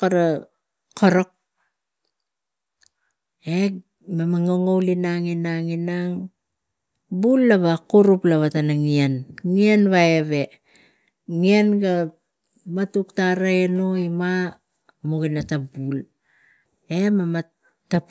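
No technical faults detected.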